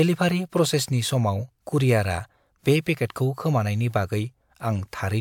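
Nothing in this recording of speech stands out as a technical fault, so there's nothing to flag here.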